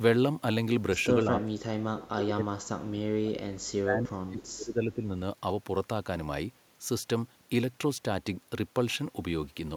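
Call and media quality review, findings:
Speech suppressed in double talk, 1.22–3.51 s and 3.81–5.13 s: level ducks by up to around 30 dB, roughly 2 s and 1.5 s affected. Likely the echo canceller's suppressor clamping during overlapping talk.

Echo leak, 3.62–3.71 s: brief copy of the talker 295 ms late, around 30 dB down. Likely loudspeaker echo leaking past that side's canceller. A discrete delayed repeat rather than smeared room reverb.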